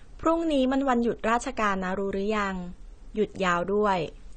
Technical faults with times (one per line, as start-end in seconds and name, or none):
0.00-4.36 AAC compression